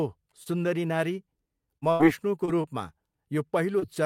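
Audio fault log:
0.43–0.47, 1.77–1.84, 2.45–2.50, 2.62–2.65, 3.79–3.84 s: short concealed packet loss. Roughly 20 ms of audio (40 ms at 1.77 s) failed to arrive, so the receiver extended the preceding sound, pitched or noise-like, and crossfaded back, leaving brief smears or wobbles.
1.92–2.01 s: burst of packet loss. About 80 ms of consecutive audio went missing, just after the 1.77 s gap. The receiver stretched the last sound into a held buzz or hiss that faded as the gap continued, then playback resumed with that stretch absent.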